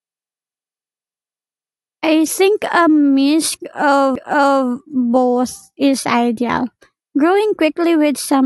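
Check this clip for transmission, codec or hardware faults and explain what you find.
One hardware fault is present: a CD skip at 4.15 s. A jolt or disc flaw sent the laser to another turn of the spiral, so the player muted for only a few milliseconds and resumed elsewhere in the speech. It sounds like a tick and an abrupt jump. The waveform shows a tiny flat gap with a mismatched join, and the spectrogram shows a thin vertical line where the speech pattern changes suddenly.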